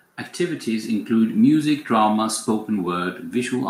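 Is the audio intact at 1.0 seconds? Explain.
No. At 1.0 seconds the speech is in the middle of an automatic gain rising, which runs from about 0.37 to 1.42 s. The gain control judged the input too quiet and turned its gain up step by step, lifting the level by about 5 dB over roughly a second. Voice and background noise swell together. That shared, gradual rise separates it from a speaker simply talking louder, where the background would stay put.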